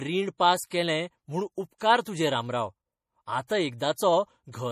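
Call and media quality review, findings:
Treble absent above 15.2 kHz, watery swirl and smeared consonants throughout. Likely MP3 compression, starved bits zeroing weak bands; damage fits roughly 40 kbps.

Pre-echo at 0.68–0.71 s, 1.78–1.81 s, 3.47–3.50 s, 3.78–3.80 s. Hiss of about 22–31 ms precedes attacks; block-spread quantisation noise from the codec.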